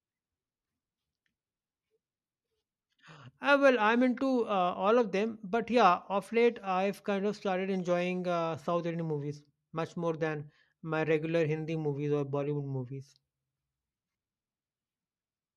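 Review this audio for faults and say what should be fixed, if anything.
Nothing needs fixing, since no technical fault can be heard anywhere in the recording.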